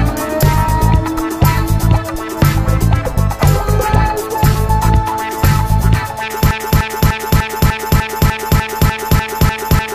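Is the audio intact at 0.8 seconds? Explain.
Yes, at 0.8 seconds the audio is intact, with nothing audibly wrong at that moment.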